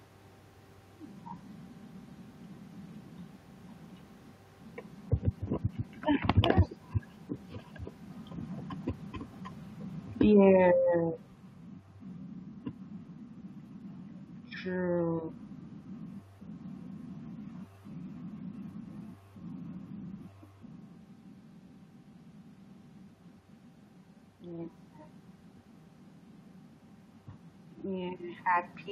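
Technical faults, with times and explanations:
10.25–11.8 s, automatic gain falling: the speech sinks by about 8 dB over roughly a second and a half, with the room noise behind it dropping by the same amount. That shared drop is what sets it apart from the talker's own movements near the microphone around 8 s and 20.5 s. The automatic gain control judged the input too loud or its background noise too strong and eased its gain down gradually, lowering voice and background together.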